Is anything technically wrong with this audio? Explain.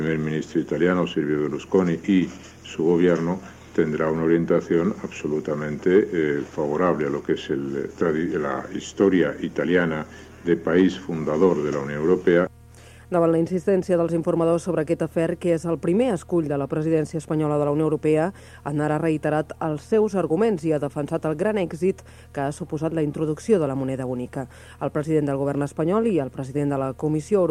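No, nothing technically wrong can be heard anywhere in this audio.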